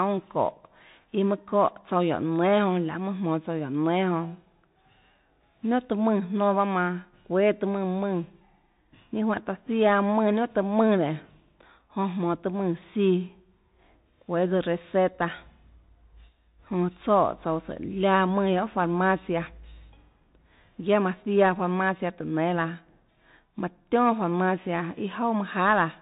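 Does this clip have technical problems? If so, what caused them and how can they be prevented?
Yes. The whole clip of speech sounds boxed-in and muffled, with nothing above about 3.8 kHz. Sibilants come out scratchy, loud high-pitched sounds break up, and a fine granular hiss runs underneath. This is the Bluetooth CVSD headset codec, consistent with a 64 kbps link. It codes the waveform one bit at a time as a step up or down, and its adapting step can't keep pace with fast, loud changes. To prevent it, switch the headset to a wideband profile such as mSBC or record through a wired microphone.

From 16.00 to 16.71 s a piercing tone at 5.3 kHz rises within about a third of a second to roughly 10 dB above the speech, then stops. This is loudspeaker feedback squeal. The microphone picked up the speaker it was feeding, and at that frequency the loop's gain exceeded one, so the tone kept reinforcing itself. 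To prevent it, keep microphones out of the loudspeaker's path, lower the monitor gain, or use headphones.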